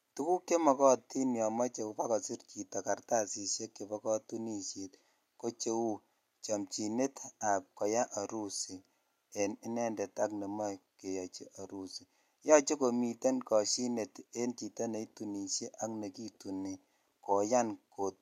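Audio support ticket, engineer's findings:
Listened through the speech recording and nothing stood out as a problem.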